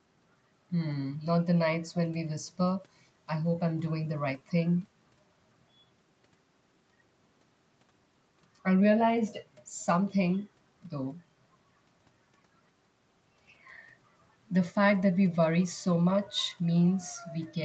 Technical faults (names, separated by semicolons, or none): none